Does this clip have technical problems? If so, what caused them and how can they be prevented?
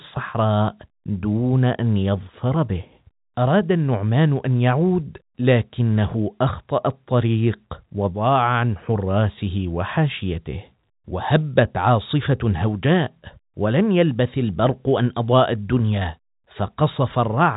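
No, this speech carries no technical faults; it has the character of G.711 telephone coding, with the band stopping around 3.8 kHz as that narrowband format does.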